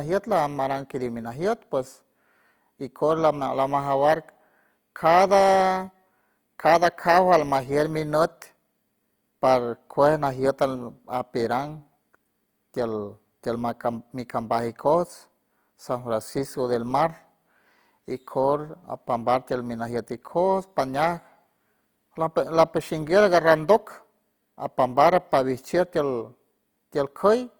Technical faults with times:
0.00-27.59 Opus compression

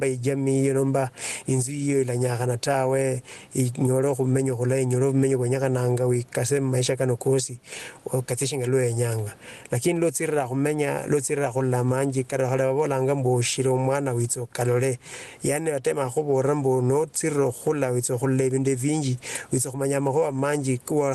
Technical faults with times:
0.00-21.14 gain pumping

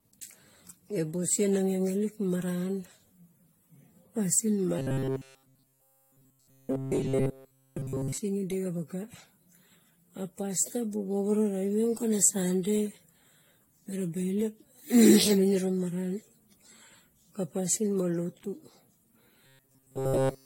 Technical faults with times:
0.00-20.45 generation loss
4.79-8.18 robotic sound from repeated short buffers
19.46-20.45 robotic sound from repeated short buffers

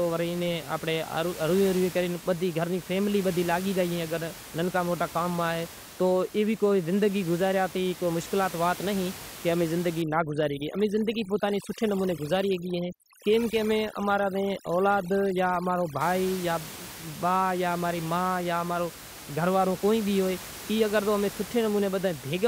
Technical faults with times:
10.02-16.01 overdone noise removal

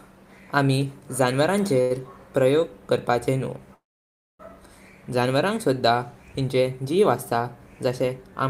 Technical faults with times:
1.81-1.92 short stall from a late packet
3.74-4.41 call audio freeze

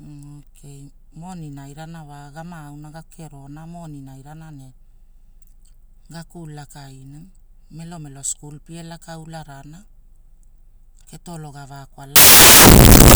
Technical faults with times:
12.16-13.15 samples built from the wrong bytes

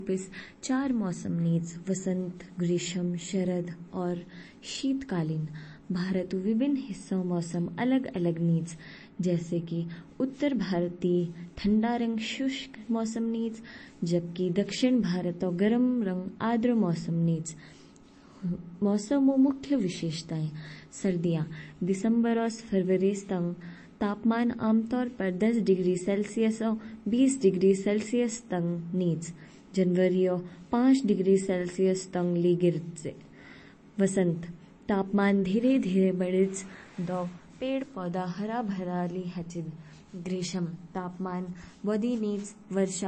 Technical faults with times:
0.00-43.07 MP3 compression

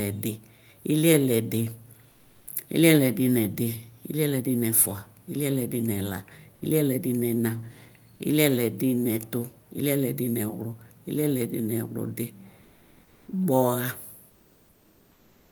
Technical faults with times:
2.11-2.47 comfort noise in place of the background
12.63-13.27 comfort noise in place of the background
14.29-15.52 comfort noise in place of the background

